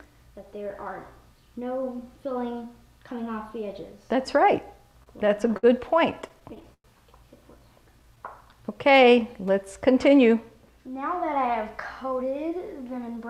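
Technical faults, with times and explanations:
5.03–5.65 s and 6.11–6.86 s: repeated stalls (stutter). Packets arrived too late to keep the jitter buffer filled, so playback kept halting. The first run has 5 gaps totalling 111 ms, the longest 58 ms, about 18% of the span. The second has 8 gaps totalling 172 ms, the longest 104 ms, about 23% of the span. The receiver stretched the last sound across each gap. Nothing is lost, but the audio drags and stutters.
7.59–9.11 s: jitter buffer slow-down. The buffer was short of reserve, so the receiver repeated tiny pitch-period slices again and again. This added 125 ms over the stretch. Playback runs at 92% speed with the pitch unchanged. Sounds are drawn out and the pace feels sluggish.
12.05–13.24 s: jitter buffer speed-up. Too much audio had built up in the buffer, so the receiver trimmed short pitch-period pieces in quick succession. Roughly a tenth of a second was removed. 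Playback runs at 109% speed with the pitch unchanged. The passage sounds hurried, as if it were being rushed toward the end.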